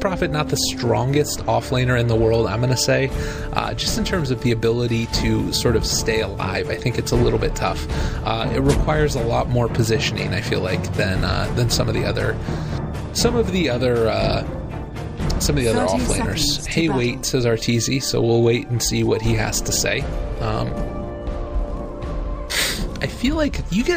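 No technical faults can be heard anywhere in the audio, and the signal carries through without any defect in its transmission or processing.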